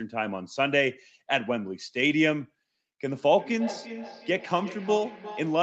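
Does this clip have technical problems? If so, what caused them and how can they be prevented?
Yes. From 3.35 s to the end of the speech clip there is feedback echo between two devices: the speech returns at a regular interval of roughly 0.4 s, each repeat thinner and more ringing, peaking about 14 dB below the direct speech. One device in the room is playing back what another device's microphone sent, and that microphone picks it up again; each device's echo canceller only removes its own playback, so the loop survives. To prevent it, keep only one device joined to the call per room, or mute the others' speakers and microphones.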